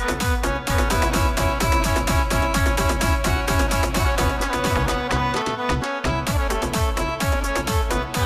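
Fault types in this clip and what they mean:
Doubled audio track: the sound was most likely picked up a second time through a slower path, or an edit left two copies out of step, so a full-band duplicate runs about 0.7 s behind the original at roughly the same loudness. From 0.7 s to 5.42 s everything is heard twice, with the second copy carrying no decay or room colour. It cuts in and out abruptly at those two points rather than fading like a natural echo.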